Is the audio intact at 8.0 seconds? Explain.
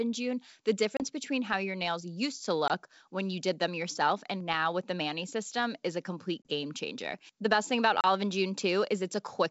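No. From 8.01 to 8.05 s there is packet loss on an ADPCM call: about 30 ms, roughly three packets, goes silent with hard edges. Unlike a plain dropout, the speech resumes slightly distorted while the decoder's predictor and step size resynchronise.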